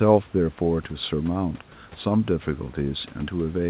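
No technical fault can be heard: the speech carries the narrow band of a call codec, with nothing above 4 kHz, which fits G.711 mu-law, and the room's background noise sits about 29 dB below the speech.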